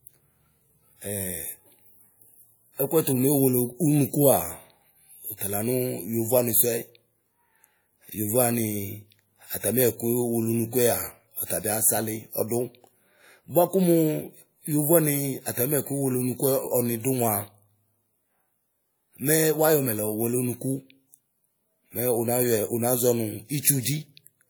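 A speech recording with one pre-echo fault, from 23.60 to 23.64 s near the end. A hiss of about 34 ms runs ahead of a sharp onset, softening its attack. The transform codec spread quantisation noise sized for the loud attack back across the quiet lead-in of the same block.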